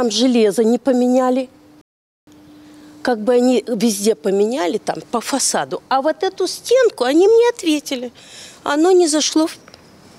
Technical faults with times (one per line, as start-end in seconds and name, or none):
1.81-2.27 rebuffering stall